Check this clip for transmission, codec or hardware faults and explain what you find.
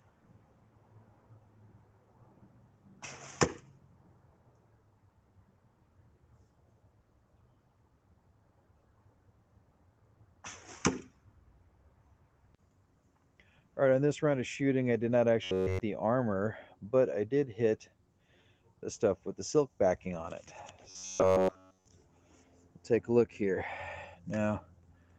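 Two faults stand out: a noise suppressor pumping the sound throughout, and two bursts of robotic buzz, all heard within a band that stops at 8 kHz from the Opus call path.

Noise suppressor applied to music or sounds, throughout: a suppressor built for speech treats sustained tones and decaying tails as noise, pulling them down by about 10 dB while attacks pass. Sustains sink and swell, so the level pumps. Unlike codec thinning, it tracks note envelopes.

Robotic sound from repeated short buffers, 15.44 to 15.81 s and 20.90 to 21.86 s: the sound becomes a rigid metallic buzz at 93.8 Hz. This is likely from a starved jitter buffer looping the last roughly 10.7 ms of audio with no fresh signal. The fixed pitch separates it from random dropout clicks.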